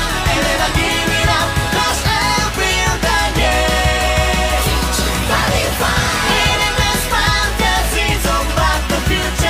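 Nothing stood out as a technical problem on listening to this audio.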